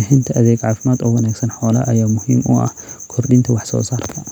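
No dropouts, glitches, distortion or level faults can be heard anywhere in the recording.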